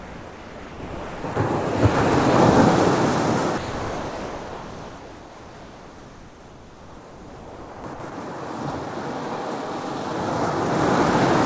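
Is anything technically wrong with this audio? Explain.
Yes, there is sound dropped by the voice detector at 0.00–1.24 s, 1.34 s, 3.58–7.84 s, 7.94–8.00 s and 8.10 s. The likely cause is the sender treating real sound as background, so steady comfort noise replaces it. Unlike packet-loss concealment, the gaps hold flat noise rather than smeared repeats. Through the call codec, nothing is heard above 8 kHz.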